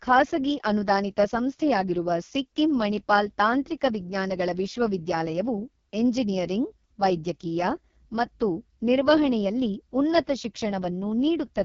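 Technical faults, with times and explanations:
Throughout, AMR wideband (HD Voice) codec at heavy damage: the speech sounds rough and raspy, which fits the lowest 6.6 kbit/s mode, where the pulse-driven vocal tract model is starved of bits. Nothing is heard above 7.1 kHz, and the top band is synthetic noise.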